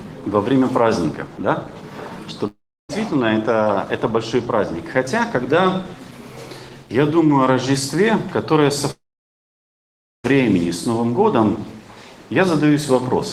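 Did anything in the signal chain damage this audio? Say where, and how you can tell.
Yes. At 2.47 to 2.91 s and 8.91 to 10.26 s the sound trails into a fading buzz, then near silence for about 0.3 s and 1.3 s, and resumes with material missing. This is likely a long network dropout: concealment stretched the last audio, then gave up.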